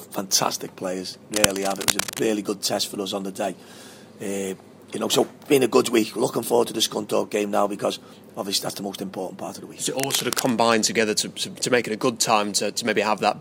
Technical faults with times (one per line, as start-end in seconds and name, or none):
1.34-2.20 cable scratch noise
9.99-10.51 cable scratch noise